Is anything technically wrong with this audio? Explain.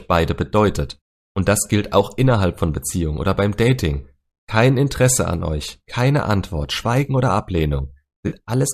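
Yes. From 8.28 to 8.35 s, just before the end, there is AAC frame loss with concealment. About 40 ms of coded audio, which fits four lost frames, went missing, and the decoder filled the gap by reusing the last good spectrum. The result is a brief smeared, noisy, phasey patch in the speech rather than a clean dropout. The light coding texture heard throughout likely comes from low-delay AAC compression at 64 kbps.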